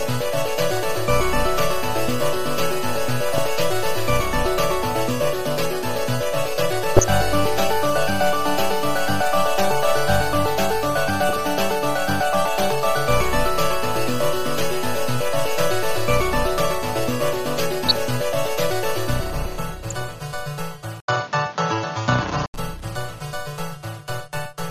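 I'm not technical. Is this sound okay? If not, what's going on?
No, it has three problems.

MP2 compression runs through the whole clip and gives it a dull, plainly gurgling, grainy quality. This is likely the result of low-bitrate MPEG Layer II coding, the kind used on digital radio. It splits the sound into many narrow slices and, with too little data to spend, drops the highest slices entirely and stores the rest only roughly.

DAB burbling appears in six short bursts, at 0.71 to 0.77, 3.29 to 3.40, 6.97 to 7.15, 11.29 to 11.48, 17.86 to 18.07 and 19.90 to 20.04 seconds. Each one is a brief burst of noisy blips over the sound. It comes from weak radio reception: a few corrupted bits slip through error correction and put short blips of noise into single slices of the sound for a fraction of a second.

Input switched to a poorer device happens from 21.00 to 22.54 seconds. There is a short gap of about 80 milliseconds, and then the sound turns noticeably duller and boxier, with nothing above 7.1 kHz. 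It also changes level somewhat and carries faint new background noise. The likely cause is that the recording system swapped to a lower-quality microphone or headset partway through, then switched back.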